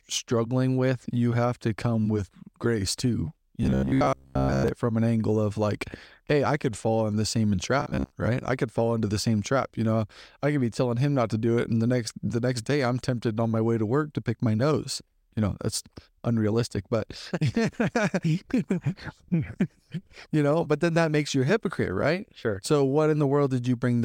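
Speech with two bursts of robotic sound from repeated short buffers, at 3.63–4.68 s (after "come with grace too") and 7.80–8.12 s (after "fall in the same"). Most of the audio in each burst becomes a rigid 66.7 Hz metallic buzz, likely from a 15 ms buffer being looped. The fixed pitch distinguishes it from ordinary dropouts or stutter.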